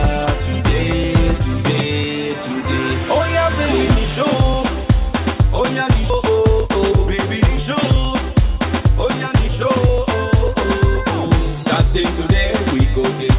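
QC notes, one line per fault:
6.1 s: skip ahead. The sound jumps forward with no gap where something should be. Roughly 0.4 s of audio is gone. That stretch was lost in transit, or thrown out by the jitter buffer when it overflowed, while later audio was already queued. The receiver joined the two sides almost directly, so the cut is abrupt. Nothing fills the hole.
6.20 to 8.82 s and 9.28 to 11.66 s: jitter buffer speed-up. The sound runs faster but keeps its pitch, at 105% in the first stretch and 102% in the second. The jitter buffer held more audio than its target. To shrink that backlog, the receiver cut out short pieces of one or a few pitch periods, again and again. About 150 ms is trimmed in the first stretch and about 50 ms in the second. The first sounds noticeably hurried, while the second is only slightly quickened. All of this passes through a call path with nothing above 4 kHz.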